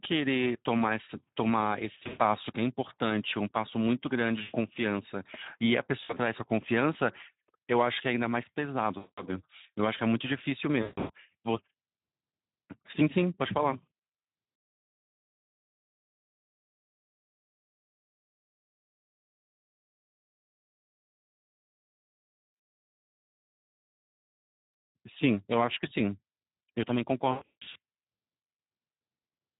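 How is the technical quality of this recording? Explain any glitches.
The quality is poor, with low-bitrate codec damage throughout and repeated dropouts.

Across the whole recording, the speech carries Speex codec damage. The sound points to a bitrate around 11 kbps. CELP coding at this rate has few bits to describe the excitation signal. So the voice comes out noisy and hoarse. Any content above 8 kHz is only a shaped noise fill, not real detail.

VoIP packet loss concealed by the speech codec occurs at 1.99–2.22 s, 4.41–4.56 s, 6.03–6.14 s, 8.97–9.28 s, 10.81–11.11 s, 13.90 s and 27.31–27.76 s. Lost audio ranges from 60 ms to 340 ms. At 27.31 s it is scattered over 440 ms, with the longest gap 160 ms. The decoder fills each gap by repeating its last pitch and filter at falling gain. You hear a buzzy, smeared tone or a coloured noise fading out. The voice then stays weak briefly after recovery.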